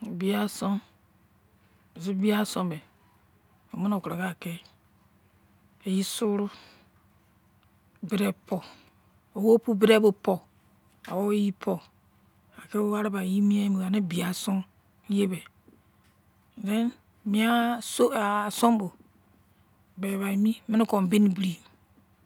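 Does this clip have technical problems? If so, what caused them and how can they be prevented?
No technical faults are audible.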